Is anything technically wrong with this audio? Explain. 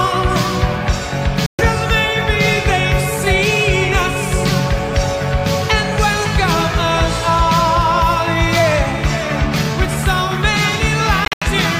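Yes. Bluetooth dropouts hit at 1.46–1.62 s and 11.25–11.45 s, most likely packets reaching the headphones too late and being discarded. The first loses about 126 ms of sound; the second breaks into separate gaps, the longest about 84 ms, and each time the sound resumes further on, as though it kept playing.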